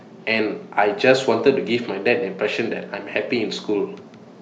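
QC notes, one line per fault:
No faults found in the speech. Nothing here needs a QC entry.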